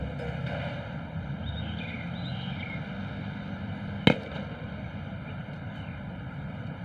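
From the start to the end of the clip there is a channel delay (comb filtering) fault. One channel arrives late by roughly one and a half milliseconds, and when the two are folded to mono the shared content cancels at a series of evenly spaced frequencies, the first around 400 Hz and the rest repeating at regular intervals above it. These fixed notches give the whole sound a hollow, phasey colour that never changes over time.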